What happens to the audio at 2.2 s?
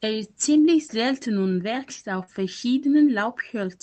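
Right after "selten und wächst auf", from 2.23 to 2.30 s, there is a short concealed packet loss. About 40 ms of audio arrived too late for the decoder, which bridged the gap by extending the preceding sound before crossfading back, leaving a brief smeared, wobbly patch.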